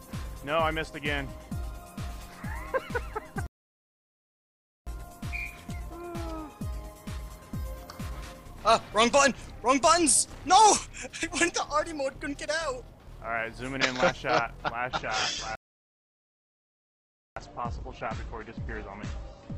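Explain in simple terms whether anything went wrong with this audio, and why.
Two things went wrong. The first is a playback stall. At 3.47 s the sound stops dead and stays silent for about 1.4 s, picking up again at 4.87 s. The same happens from 15.55 s to 17.36 s, a gap of about 1.8 s. Both gaps cut into the sound mid-flow. The player likely ran short of data, or was held up, and had to wait before carrying on.

The second is an adaptive stream dropping to a lower bitrate. From 14.91 s to the end, the sound suddenly turns rougher, with no gap at the switch. The stream switched to a smaller, cheaper version of the audio, which is why the quality falls so abruptly. The second stall falls inside this poorer stretch.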